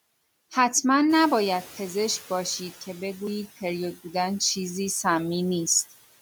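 Around 1 s the room noise jumps, and from 1.09 to 2.71 s the noise suppressor is catching up: the noise comes through with less reduction at first, then sinks by about 7 dB over 1.6 s.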